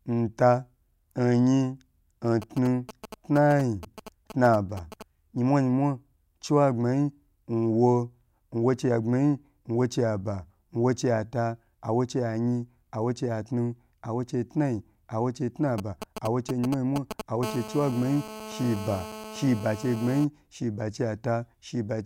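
Speech recording interrupted three times by interference from a nearby 2G handset. From 2.42 to 5.03 s and again from 15.78 to 17.45 s there are GSM signalling bursts, a galloping dit-dit-dit of brief 217 Hz buzzes. The first episode sits roughly 10 dB below the speech and the second is louder, only around 5 dB down. The phone is exchanging short control transmissions with the network, and the audio circuitry rectifies each radio burst into an audible click or buzz. The second signalling episode runs straight into GSM phone buzz from 17.45 to 20.25 s. This is a continuous, hard, raspy tone at 217 Hz with a dense stack of harmonics, about 14 dB below the speech and unrelated to it. Here the handset has moved into a call and transmits its time-slot bursts 217 times per second without a break, so the rectified pulses form a steady buzz rather than intermittent groups.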